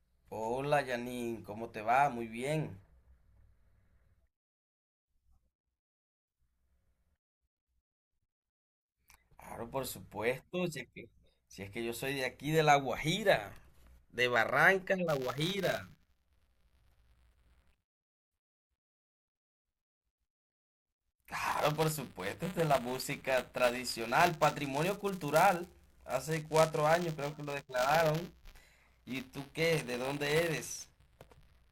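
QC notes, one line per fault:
15.07 s to the end, buffer tearing: the writer and the playback hardware have slipped and cross inside every 5 ms period, so a small slice of each buffer replays speech about 20 ms old between hard joins, giving a steady 200 Hz robotic rattle whenever speech is present.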